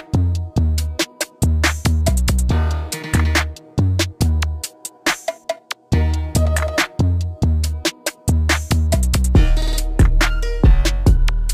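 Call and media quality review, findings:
No faults found on review. Nothing audible warrants follow-up.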